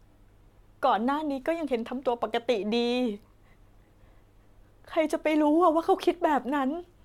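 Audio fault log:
No faults are heard anywhere in this speech.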